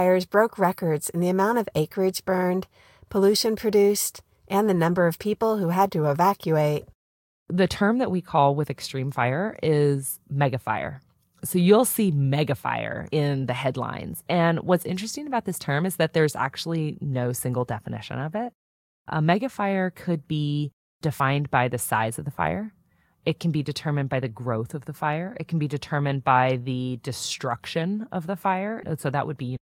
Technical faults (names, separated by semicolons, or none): compressed frames skipped